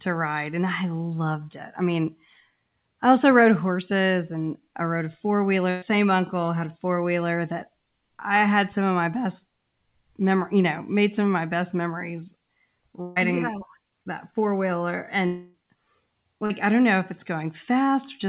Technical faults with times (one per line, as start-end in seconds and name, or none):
5.70-5.84 burst of packet loss
13.02-13.18 burst of packet loss
15.26-15.56 long network dropout
16.46-16.52 short concealed packet loss